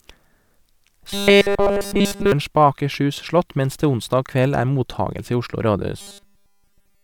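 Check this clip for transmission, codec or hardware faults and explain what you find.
Robotic sound from repeated short buffers affects this speech from 1.10 to 2.32 s and from 6.01 s to the end. All the real audio is likely replaced by a 5 ms segment looping, forcing a rigid, metallic 200 Hz buzz.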